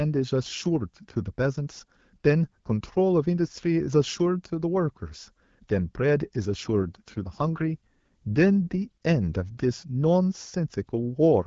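From 6.49 to 8.88 s there's an AMR rate drop. The speech goes rougher and more synthetic, which fits the network stepping the AMR-WB codec down from 12.65 to 8.85 kbit/s to spend bits on error protection. The band stays put, with no gap.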